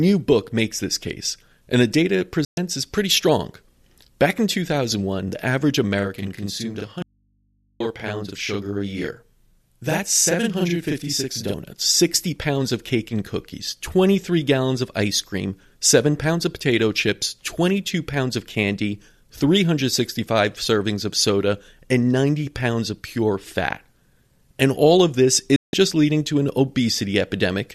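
At 2.45 to 2.58 s the speech drops into true silence for about 120 ms after a fade of only 3 ms, a digital broadcast dropout in which the receiver muted while corrupt or missing frames went by. That length fits roughly five lost frames. The total silence, with nothing underneath, separates it from an analogue break.

From 5.99 to 11.54 s a channel delay (doubling) sets in. One channel runs 40 ms late and is summed with the other to mono, so every syllable is followed by a same-level slap copy. This sounds like a distinct echo, not comb-filter colouration.

Inside that stretch, from 7.02 to 7.80 s, the speech cuts abruptly to mains hum at about 45 dB below the signal for 0.78 s. This is an audio dropout to a faint residue, likely a lost input with the downstream path still live. The hum in the gap marks it apart from a muted digital dropout.

At 25.56 to 25.74 s a second digital broadcast dropout leaves about 168 ms of clean silence, again entered through a 3 ms fade. 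That length fits roughly seven frames.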